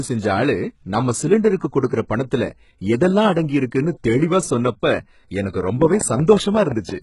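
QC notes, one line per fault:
Throughout, HE-AAC compression: the damage is heavy and the spectrum stops entirely at 11.1 kHz. The treble heard below that point is likely rebuilt by spectral band replication, which fits a bitrate of about 12 kbps. Lower bands are copied upward and shaped by a coarse envelope rather than coded. Because the copied harmonics do not line up with the real ones across the crossover, the top end sounds synthetic instead of natural.
1.57 to 1.61 s, pre-echo: just after "செஞ்சஆளு நம்ம", a sharp attack is preceded by a hiss lasting about 37 ms. The codec spread quantisation noise evenly across its transform block. Because the attack fell late in that block, noise sized for the loud onset also filled the quiet gap before it. The onset therefore sounds smeared rather than crisp.
5.82 to 6.90 s, train of clicks: starting after "தெளிவா சொன்னப்ப எனக்கு", roughly seven similar clicks arrive at a regular 5.57 per second. 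They stand about 10 dB above the surrounding signal and tick over both the sound and the pauses. Their matching shape and steady pace point to a repeating external pulse, likely interference from nearby equipment or a faulty connection or power supply.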